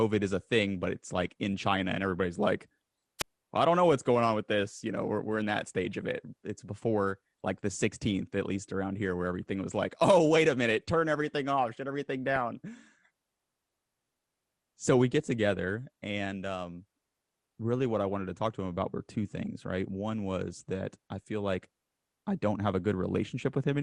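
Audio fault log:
throughout, MP2 compression: The speech sounds dull, with a gurgling, granular edge. This is likely heavy MP2 coding, fitting about 80 kbps, with upper sub-bands dropped and coarsely quantised.
3.19 to 3.29 s, wireless microphone squelch dropout: After "and everybody's like" the sound cuts to about 73 ms of near silence before "well I don't know". A fading radio signal tripped the receiver's squelch.
12.35 s and 19.46 s, DAB burbling: Brief blips of noise follow "everything off shut everything" and "him about were two". Bit errors at a fraction of a percent corrupt sub-band levels across several frames.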